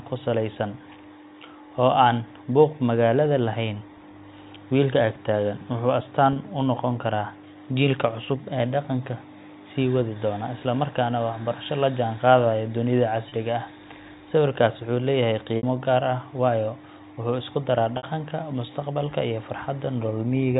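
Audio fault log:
6.33–6.36 s, 13.29–13.32 s, 15.57–15.63 s and 17.97–18.03 s: packet loss with pitch repetition. Gaps of 30 ms (after "ag taagan wuxuu astaan") and 60 ms (after "wuxuu leeyahay" and "waayo wuxuu isku daraa"), consistent with one and two lost 30 ms packets. The receiver loops the last pitch cycle, so the 30 ms gaps sound like a brief buzzy hold, while the 60 ms gaps fade into silence before speech returns with a short cross-fade. On a spectrogram it shows as frozen, evenly spaced harmonics. On the waveform it shows as identical repeated cycles tapering into a cross-fade, all within the 4 kHz telephone band.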